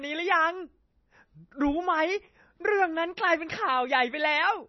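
Throughout the speech, heavy damage from what is likely MP3 compression: nothing sounds above 5.9 kHz, and weak frequency lines flicker between frames, giving a watery, swirling texture with metallic s sounds. That flicker sets it apart from a simple low-pass filter, and the damage fits a bitrate near 24 kbps.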